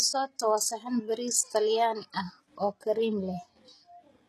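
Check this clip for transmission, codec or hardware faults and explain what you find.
One fault runs through the whole recording. From start to finish the treble sounds synthetic: s sounds come out gritty and lispy, and nothing is present above 12.4 kHz. That points to HE-AAC compression, likely at a bitrate around 16 kbps. Only the lower spectrum is coded, and the upper band is rebuilt by copying lower bands upward, so the harmonics there no longer line up.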